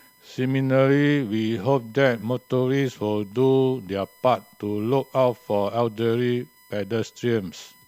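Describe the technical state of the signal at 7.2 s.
At 7.2 s the speech carries USB whine, present across the whole clip. The USB bus pulls current in 1 ms frames. That pulsing leaks into the audio through shared power or ground. The result is a steady whine locked to 1 kHz and its multiples. Here the strongest part sits high, at 14 kHz. It stays well under the speech, roughly 35 dB down. It sounds like a thin, fixed-pitch whistle.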